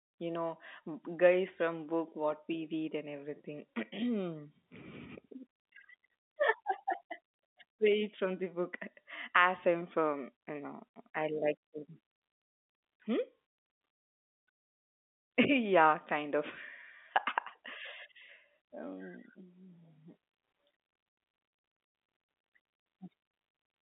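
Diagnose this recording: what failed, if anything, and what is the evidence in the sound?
Nothing failed; the telephone-band speech carries no audible faults.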